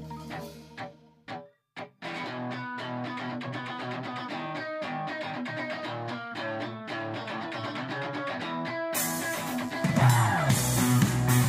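From 9.02 to 10.68 s a raspy 50 Hz mains buzz sits roughly 25 dB below the sound. Switching spikes spread harmonics into the kilohertz range, unlike a smooth low hum.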